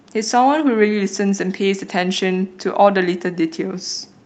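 No technical faults can be heard in this speech, which comes through an ordinary WebRTC call path with Opus coding and its 8 kHz bandwidth.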